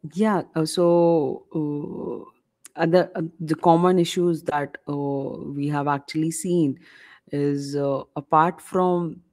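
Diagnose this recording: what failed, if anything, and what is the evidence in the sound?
The network stage failed, as a short concealed packet loss at 4.49 to 4.53 s, just after "uh the common issues". A packet arrived too late to decode. The receiver bridged about 20 ms by extending the preceding sound, then blended back. It is heard as a brief smear.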